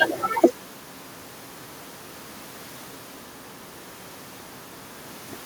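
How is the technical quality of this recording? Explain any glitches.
Nothing here needs explaining: the speech comes across without any glitches or dropouts, so there's nothing to flag.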